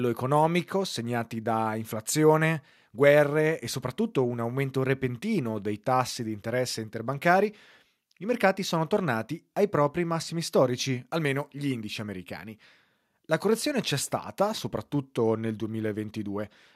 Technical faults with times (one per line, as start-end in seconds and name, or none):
none